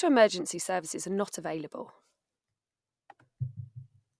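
No technical faults can be heard anywhere in the speech recording. There are no events to place on a timeline.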